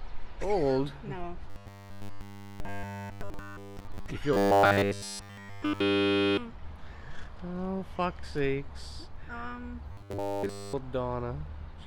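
A rigid, metallic 100 Hz buzz replaces the sound from 1.5 to 4.08 s, 4.33 to 6.37 s and 9.92 to 10.73 s: robotic sound, likely from one repeated 10 ms buffer.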